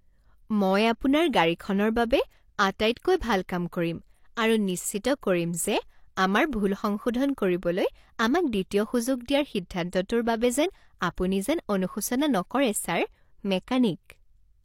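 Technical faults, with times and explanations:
5.21 s and 11.15 to 11.18 s, pre-echo: the codec spread the quantisation noise for each transform block across the whole block, and a sharp attack in speech fell late in that block, so noise sized for the loud onset also filled the quiet moment just before it. A short hiss, about 15 ms at 5.21 s and 22 ms at 11.15 s, runs ahead of each attack, which then sounds soft and smeared.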